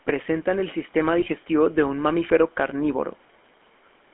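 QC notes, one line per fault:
throughout, GSM full-rate codec: the speech has a plainly audible buzzy, gravelly roughness, because the codec rebuilds the voice from a vocal-tract model driven by coarse, regularly spaced pulses. The band runs about 250 Hz to 3.4 kHz, consistent with 13 kbps GSM rather than simple band-limiting, which would sound dull but smooth.
1.20–1.25 s, lost GSM frames: between "el sistema" and "de un mamífero" the sound briefly holds as a rough, metallic ring instead of dropping out. The decoder repeated the last good frame across about 20 ms of missing audio, which fits a single lost frame. A plain dropout would leave a silent gap.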